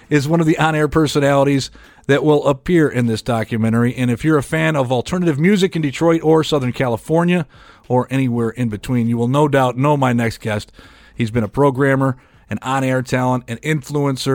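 No technical faults occur at any point in this speech recording, so there is nothing to describe in time order.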